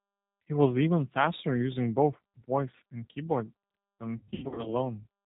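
From start to finish the speech carries G.729 codec damage, plainly audible: a slightly rough, synthetic timbre from pulse-excited filter resynthesis, which fits an 8 kbit/s G.729A link. A spectrogram shows nothing above 4 kHz and a smeared, grainy harmonic structure.

Between 4.18 and 4.75 s comes VoIP packet loss concealed by the speech codec. About 300 ms of audio drops out in bursts across roughly 480 ms, the longest run 100 ms, which suggests around fifteen lost packets. The decoder stretches the last pitch and filter into a fading, drawn-out sound, and speech stays weak after recovery. The waveform shows sagging, repetitive cycles, and the spectrogram shows frozen harmonics.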